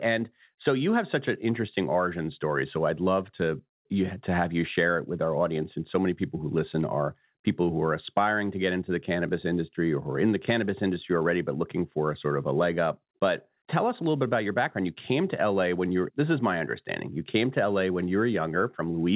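No technical faults are audible.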